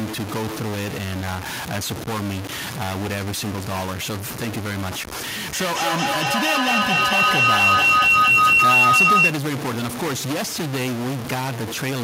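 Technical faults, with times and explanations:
Throughout: stuck bit, likely. Distortion rides on the speech, and pauses fill with noise instead of going quiet, as if one data line never changes state.
5.53–9.41 s: feedback howl. A loop between two devices builds into a tone around 3 kHz, with repeats roughly every 200 ms, peaking about 9 dB above the speech.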